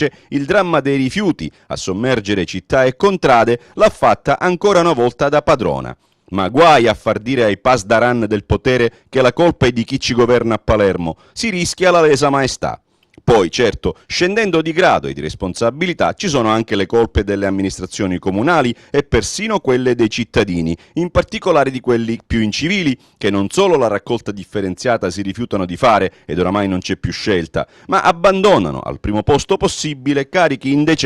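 Nothing in the audio stands out as a technical fault at any point, so there's nothing here to track down.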